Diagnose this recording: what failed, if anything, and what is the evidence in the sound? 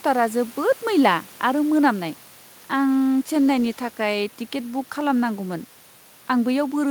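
Nothing in the recording points to a failure at any stage from capture through conversion, processing and playback, and the speech signal stays continuous and stable throughout.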